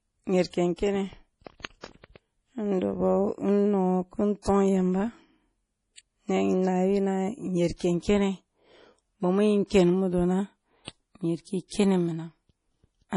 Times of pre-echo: 1.81-1.83, 7.76-7.80

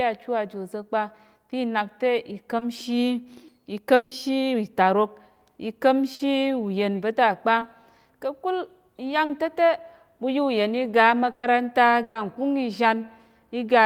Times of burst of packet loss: 11.31-11.45, 12.03-12.17

